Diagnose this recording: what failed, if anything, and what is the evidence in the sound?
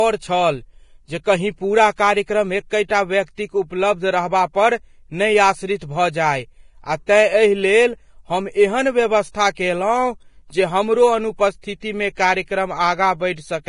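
The speech sounds hissy and grainy, with nothing above 10.6 kHz. This is likely Vorbis compression at about 30 kbps, with coarse codec quantisation roughening the treble into noise.

Brief hiss smears onto attacks at 1.24 s (between "छल जे" and "कहीं पूरा"), 2.88, 7.06, 9.55–9.57 and 11.80–11.82 s. This pre-echo comes from block-spread codec noise preceding each onset.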